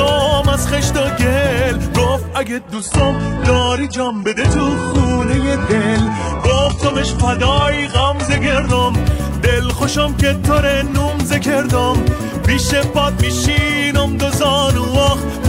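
At 2.73 s the sound suddenly thins out, and it stays that way until 8.73 s: a classic adaptive stream at a lower bitrate. For those six seconds the player seems to have dropped to a much leaner encode, and the dulled top end points to something like a low-rate HE-AAC stream. Nothing above about 11.1 kHz survives, codec artefacts pile up, and then full quality snaps back with no gap on either side.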